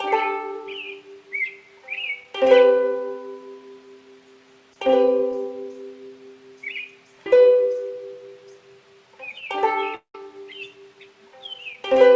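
From 9.95 to 10.15 s, the sound breaks off and is replaced by a fading, buzzy continuation of what came just before, which dies away into silence for the last part of the gap. Playback then resumes further on, with the missing audio never heard. This is most likely a long network dropout: for roughly a fifth of a second no packets arrived, and the receiver's concealment extended the last sound until it ran out. On a waveform the envelope decays smoothly into a flat silent stretch of about 110 ms. On a spectrogram a smeared, repetitive texture thins out into an empty band before normal content returns abruptly. Throughout, the call path leaves nothing above 8 kHz, which fits a G.722 codec at 64 kbps.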